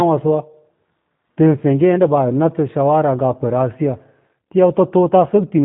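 From start to finish the speech carries the G.729 codec's fingerprint, and the damage is easy to hear. The sound is rebuilt from a vocal tract filter, a pitch predictor and a handful of pulses per short frame, so it comes out a bit rough and synthetic, which points to the 8 kbit/s G.729A flavour. Nothing gets through above 3.9 kHz, so everything sounds boxy and phone-like, with the crisp top end gone.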